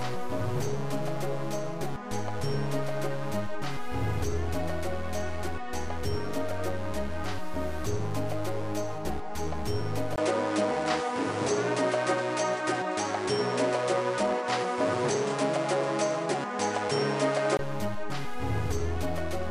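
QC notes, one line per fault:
10.16 to 17.59 s, input switched to a poorer device: at 10.16 s there's a brief gap of about 20 ms, then the top end is gone, with nothing above 10.2 kHz, and a new, quieter noise floor comes in around 30 dB under the sound. Loudness stays about the same. At 17.59 s the full band comes back. That's likely the recording hopping to a lower-grade mic and back, with the duller tone and extra noise coming from that device.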